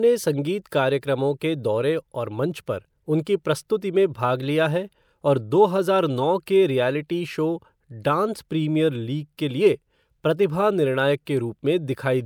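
No technical faults are audible anywhere in the speech.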